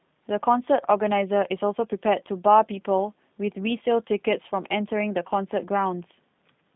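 Throughout, the speech sounds thin, rough and slightly synthetic, with nothing above 3.8 kHz: G.729 codec damage, an 8 kbit/s coder rebuilding each frame from a filter, pitch predictor and sparse pulses.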